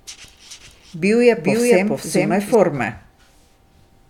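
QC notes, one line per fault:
0.51–2.55 s doubled audio track: speech copy trails about 0.4 s, 5 dB quieter, likely slower second path; unlike echo, no decay, abrupt edges.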